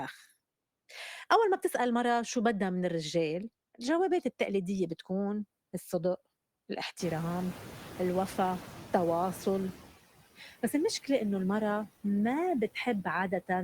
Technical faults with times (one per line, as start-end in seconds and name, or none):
0.00-13.63 noise suppressor artifacts
6.99-9.83 noise suppressor catching up
10.38-10.74 speech cut by the noise suppressor